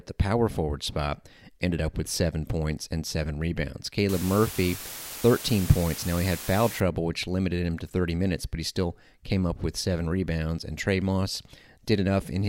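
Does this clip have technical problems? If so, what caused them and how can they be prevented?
Yes. After "points and seven rebounds", from 4.09 to 6.80 s, the speech sits in a steady, even hiss. The hiss is only about 10 dB below the speech and lifts away at "which limited him to". This is low bit depth with dither. The signal was cut to 6 bits. Dither noise was added before rounding, so the error became smooth white noise rather than distortion. To prevent it, keep at least 16 bits through every stage of processing and export.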